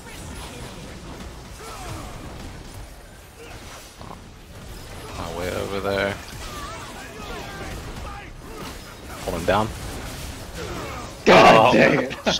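From the very start until 2.82 s, a doubled audio track is audible: a second full-band copy of the sound trails the original by roughly 0.3 s, around 5 dB quieter. The copy is likely a second capture through a slower path or an edit holding two copies out of step. Unlike a room echo or reverb, the copy repeats only once, carries no decay or added room colour, and drops out abruptly at 2.82 s instead of fading away.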